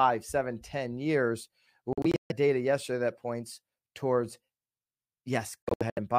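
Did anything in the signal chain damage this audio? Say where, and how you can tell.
Yes. The speech breaks into clusters of short silences at 1.93–2.32 s and 5.63–5.99 s (longest gap 139 ms), then resumes as if it had played on. This is likely a Bluetooth dropout on the wireless playback link. The spectrogram shows sharp-edged blank vertical bands, and the waveform drops flat.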